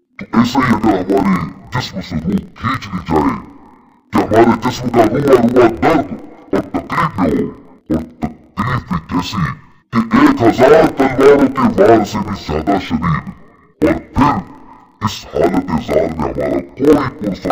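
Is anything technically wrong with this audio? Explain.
Yes. Interleaved audio read as planar runs throughout the clip. Each block of about 26 ms carries alternating left and right samples, but the first half has been taken as the left channel and the second half as the right. Each half therefore spreads half the material across the full block, playing it at half speed. The sound drops an octave (12 semitones), doubled and choppy, with blocks repeating at a 38.3 Hz rate.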